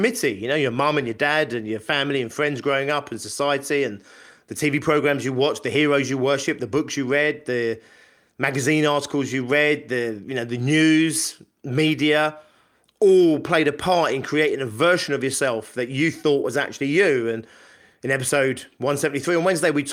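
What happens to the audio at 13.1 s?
Nothing goes wrong at 13.1 s; the speech there plays through intact, with no dropout, click, glitch or other fault.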